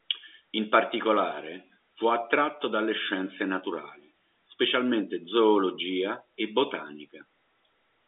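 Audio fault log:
No faults to log for this audio.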